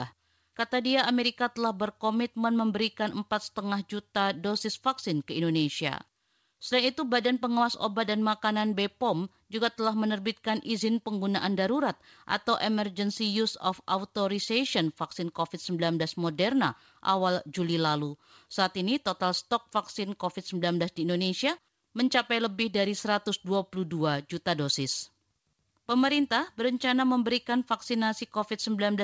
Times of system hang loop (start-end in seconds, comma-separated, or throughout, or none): none